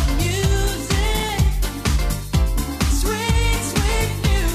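From 1.17 to 1.29 s there is a burst of processor overload crackle lasting about 0.12 s. The processor was falling behind its buffer deadlines, and each missed buffer dropped out to silence with hard edges on either side. The rapid run of short dropouts, spaced in a way that points to buffers of only a few milliseconds and around five misses, is heard as a gritty tearing laid over the sound until the load clears.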